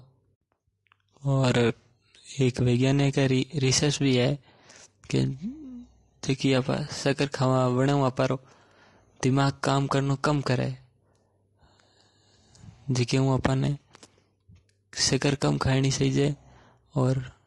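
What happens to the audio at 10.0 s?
The speech at 10.0 s has the same rough, grainy texture as the rest of the clip, because the damage runs through the whole recording. It's likely low-delay AAC compression. That codec works in very short frames, so it can't separate the pitch harmonics cleanly, and noise fills the gaps between them. The damage is plainly audible and fits a bitrate of around 32 kbps, where the bits run too thin to code the harmonics cleanly.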